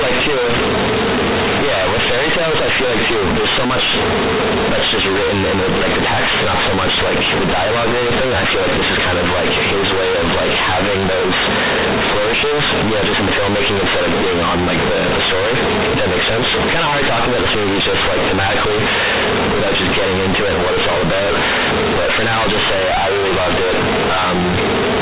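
Speech throughout this recording is buried in harsh, very loud, buzzy distortion, with heavy noise filling every pause. It is companded audio read as linear: the mu-law telephone bytes are played as raw 8-bit samples without expansion, so every sign change swings across half the range and quiet passages come out as loud as peaks.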